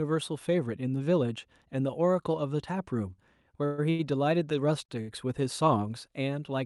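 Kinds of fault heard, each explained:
Call audio freeze: at 3.65 s the sound hangs as a fading buzz for 124 ms, likely a drained jitter buffer, then resumes with nothing lost.
Short stall from a late packet: at 3.90, 4.85 and 5.01 s a sound is stretched by 38 to 91 ms until the late packet arrives, then continues.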